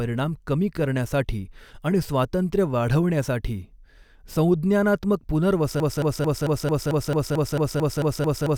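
A speech clip that falls into a broken-record loop at 5.8 s: a 0.22 s fragment repeats back to back, about 13 times, right to the end. Likely the player or stream stalled and kept replaying its last chunk, so the remaining audio is lost.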